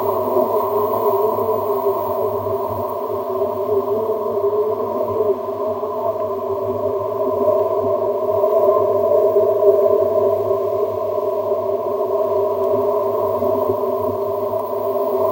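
No technical faults can be heard anywhere in this recording.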